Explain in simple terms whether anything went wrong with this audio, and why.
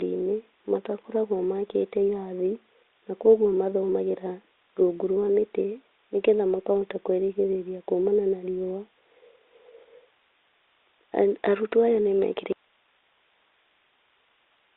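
Two things go wrong. At 6.59 s, between "rungu rwa mĩtĩ nĩgetha" and "kwĩrigĩrĩria kumana na riũa", bit errors on an ADPCM link cause a brief pop with a rough wobble, unlike a clean click.

From 12.52 s to the end, there is an audio dropout to a faint residue: the speech cuts off abruptly, leaving only hiss. It is a sudden break, not a fade, and the likely cause is the signal being lost while the line stayed open.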